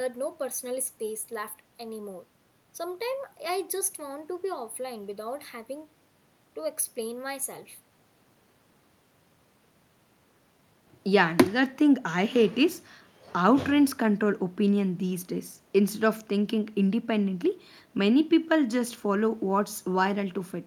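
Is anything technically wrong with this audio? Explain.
No, nothing technically wrong can be heard in this speech recording. There is no fault to point to at any moment in the clip.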